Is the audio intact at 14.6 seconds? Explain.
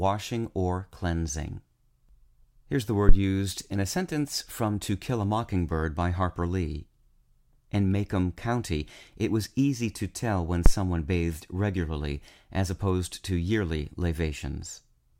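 Yes, the audio is intact at 14.6 seconds, with no dropout, click, distortion or other fault audible at that moment.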